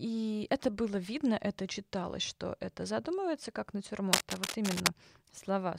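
Cable scratch noise runs through this speech clip from 4.1 to 4.92 s: dense, ragged bursts of scratching and rustling at roughly the same level as the speech itself. The likely cause is a worn cable or connector being moved, its contact resistance fluctuating rapidly.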